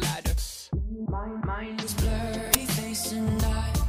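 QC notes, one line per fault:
1.79–1.84 s, damaged data in the compressed stream: there's a short glitch lasting about 44 ms. Some bytes in the stream got mangled, so the decoder misread those frames, lost its sync and had to hunt for the next valid frame header.
2.54 s, uninitialised buffer: a loud crack, gone almost instantly. A block that was never filled with audio got played anyway, so leftover memory came out as samples. Its length suggests a buffer of about 10 ms.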